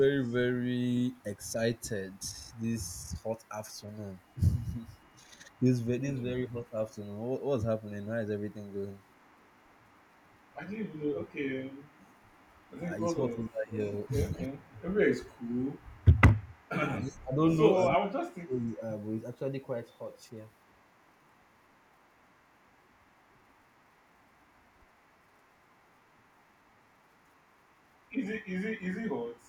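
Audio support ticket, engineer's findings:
Echo leak, 0.24–6.95 s and 8.51 s to end of clip. Faint delayed copy of the speech trailing about 268 ms behind, around 35 dB below the direct signal. Likely cause: far-end loudspeaker echo canceller leaving residual pickup. Unlike room reverb, the copy is discrete, with a fixed lag, not a smooth decay.

Speech suppressed in double talk at 3.09–3.15 s, 5.24–6.71 s, 12.83–14.53 s and 17.0–18.81 s. Near-end level pumps down during overlap, from a slight dip early on to deep cuts later, up to roughly 30 dB, affecting brief fragments at first and close to a second by 17 s. Likely cause: echo canceller unable to separate local talk from loudspeaker echo, attenuating both. Unlike packet-loss dropouts, the cuts track the overlap, with attenuation rather than hard gaps.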